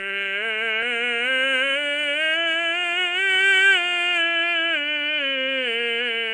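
From start to end the music has a hissy, underwater smear and nothing above 10.7 kHz. Noise-filled starved bands, not MP3 swirl, point to likely Nellymoser compression.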